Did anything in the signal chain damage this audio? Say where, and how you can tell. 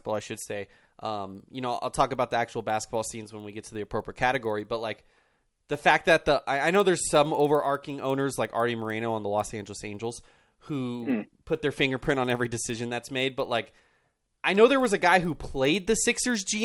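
Yes. The fault is a resampler restarted on every block in the sample-rate conversion stage, throughout the speech. Each 50 ms block was converted from 24 kHz to 48 kHz in isolation, leaving edge errors heard as a 20 Hz tick.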